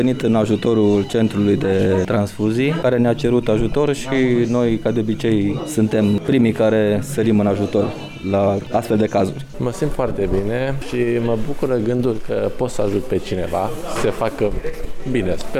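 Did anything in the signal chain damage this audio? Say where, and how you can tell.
No, nothing in the signal chain audibly damaged this audio; the signal carries no detectable defect from any stage between capture and playback.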